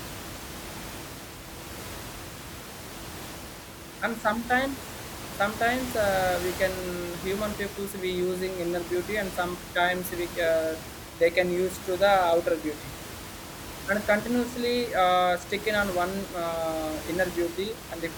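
Nothing stood out on listening; the only thing in the background is the room's own noise, about 12 dB below the speech, which belongs to the recording itself.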